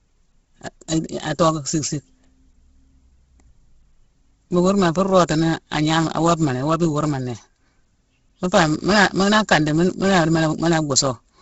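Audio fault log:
throughout Bluetooth LC3 compression, the likely cause of heavy grainy, breathy treble ending near 7.7 kHz; noise fill replaces detail, unlike plain low-pass dullness, fitting a 16 kbps stream.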